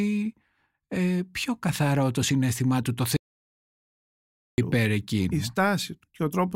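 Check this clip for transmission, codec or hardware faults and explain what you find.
There is one fault, an audio dropout to silence from 3.17 s to 4.58 s. For about 1.41 s the speech stops abruptly and the signal falls to silence, with no room tone or noise floor underneath. It then resumes mid-flow. The likely cause is a brief loss of the input, such as a disconnected device, a failed link or an accidental mute, while recording continued and wrote silence. Whatever was spoken in that span is lost. On a waveform the trace collapses to a flat line. On a spectrogram it shows as a dark vertical band with hard edges on both sides.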